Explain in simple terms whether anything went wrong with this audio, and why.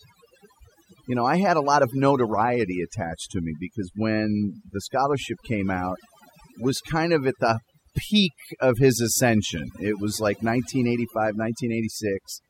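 Overdone noise removal runs through the whole clip: the cleanup was set so hard it wiped out quiet bits of speech, leaving the speech over twinkly near-silence.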